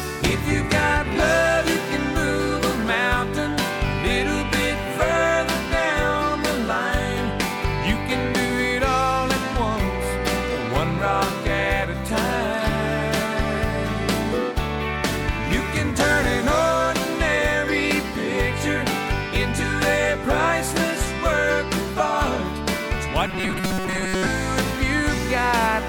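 From 23.27 to 24.26 s the audio turns into a rigid, metallic buzz near 188 Hz that only loosely tracks the underlying sound: robotic sound from repeated short buffers. The likely cause is starved input, with a roughly 5.3 ms slice looped over most of that stretch.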